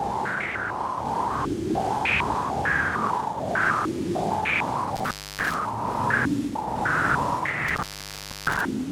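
Intermittent contact breaks the sound twice, at 4.96 to 5.54 s and 7.68 to 8.61 s, as a loose connection opens for about 0.28 s and then 0.64 s. Crackle marks each edge, with faint hiss between, shown as near-flat waveform gaps and dark spectrogram bands bordered by vertical clicks.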